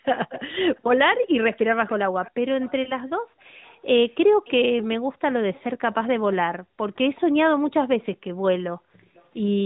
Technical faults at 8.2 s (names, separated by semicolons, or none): none